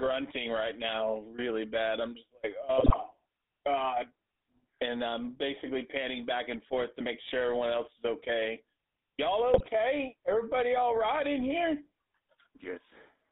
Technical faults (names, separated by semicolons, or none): GSM full-rate codec; GSM bit errors